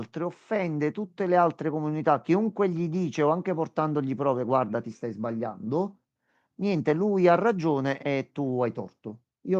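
A speech recording, with no technical fault to be heard anywhere in it. Nothing in the signal chain calls for a time, a cause or a fix.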